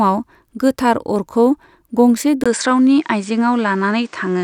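From 2.44 s, after a 20 ms gap, the speech loses everything above 9.4 kHz and gains faint background noise, likely an input switched to a poorer device.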